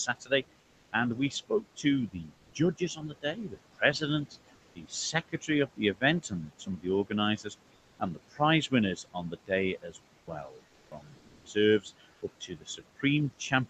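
A speech recording carrying noise suppressor artifacts from start to finish: the suppressor pulls the background down by about 21 dB, so the noise sinks between phrases and swells back under them. That moving, frame-by-frame residue is what separates it from a plain noise gate, which would simply open and close. Speech cut by the noise suppressor also recurs: at 0.06 to 0.32 s (about 14 dB deep, roughly 150 ms of sound affected), 1.3 to 4.36 s (about 19 dB, roughly 0.7 s affected), 4.74 to 9.51 s (about 20 dB, roughly 1.5 s affected) and from 9.82 s to the end (about 21 dB). Soft consonants and word endings are treated as noise and pushed down with the background, so they sound swallowed. Because speech itself fades, this differs from the residue in the gaps. Comfort noise in place of the background appears at 2.37 to 2.53 s (about 2 dB louder), 10.17 to 10.27 s (about 4 dB quieter), 10.67 to 10.91 s (level unchanged), 11.17 to 11.45 s (about 3 dB quieter) and 12.11 to 12.21 s (unchanged). 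In each gap the real room sound abruptly gives way to a flat, featureless hiss, likely from Opus discontinuous transmission, where the receiver synthesises filler noise while the sender is silent. Unlike the suppressor's residue, this filler is smoother and switches in and out as a block. The highs stop around 8 kHz, as expected from the call codec's bandwidth.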